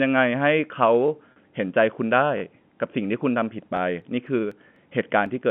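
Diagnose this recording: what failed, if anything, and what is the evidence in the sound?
Repeated buffer at 1.08 s and 2.38 to 2.42 s, in the driver or buffer stage: a 20 ms slice plays twice, then three times, with hard joins, pointing to late-arriving buffers.

Packet loss with pitch repetition at 1.32 to 1.36 s, on the network: 40 ms went missing, and the receiver looped the last pitch period, giving a brief held, buzzy tone.

Periodic USB or driver dropouts from 3.77 to 5.26 s, at the driver: evenly spaced ticks every 0.249 s, about seven in all, as roughly a millisecond of audio is skipped each time.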